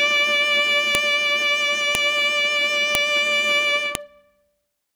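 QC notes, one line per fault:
0.95, 1.95, 2.95, 3.95 s: file header played as audio. Sharp snaps arrive exactly every 1.0 s regardless of the music, unlike random dropout clicks, as each piece's header bytes play as samples.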